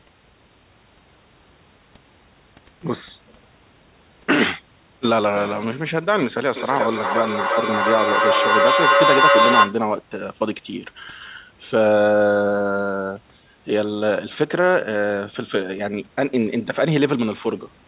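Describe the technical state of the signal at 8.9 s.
At 8.9 s there is feedback echo between two devices (6.56 to 9.83 s). Another device's playback re-enters the microphone, so each sound returns about every third of a second, building to about 7 dB above the speech. The waveform and spectrogram show evenly spaced, ringing, stacked copies.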